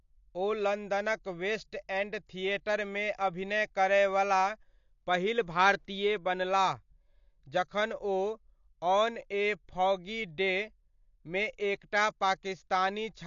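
Speech, with AAC compression damage throughout. Nothing sounds above about 7.1 kHz, so the top is dull. Sustained sounds warble and sibilants turn fizzy and smeared. The likely cause is AAC-LC coding at a low bitrate, which fits roughly 32 kbps.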